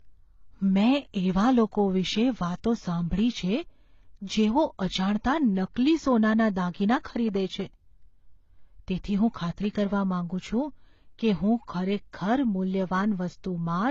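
Nothing above 7.6 kHz survives anywhere in the speech. Two sets of coding artefacts sit on top of each other, each codec's artefacts heard together. This is likely transcoding between lossy codecs, fitting low-rate AAC-LC re-encoded as HE-AAC.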